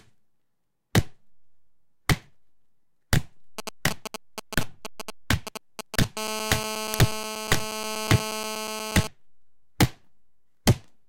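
A clip of everyday sound carries three faults. From 3.59 to 6.05 s a galloping dit-dit-dit of short buzzes sits roughly 5 dB below the sound. These are GSM signalling bursts: a nearby 2G phone sends brief groups of radio pulses at a 217 Hz rate while signalling, and the audio circuit rectifies them into audible clicks. From 6.17 to 9.07 s this becomes a steady, hard, raspy 217 Hz buzz with many harmonics, about 6 dB below the sound and unrelated to it. This is GSM phone buzz: once the phone is in a call, it transmits its bursts continuously, and each rectified pulse adds to a constant tone. Inside that buzz, at 6.94 s, a loud crack lasts about 0.73 ms, which fits a 32-sample block. This is an uninitialised buffer: the block was played before any audio had been written to it, so leftover memory contents came out as samples.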